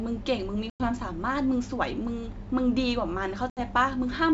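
Packet loss on an ADPCM call hits at 0.70 s and 3.50 s. It cuts hard-edged silent holes of about 100 ms and 70 ms. The decoder's adaptive predictor and step size drift from the sender's, so speech re-enters briefly distorted before settling.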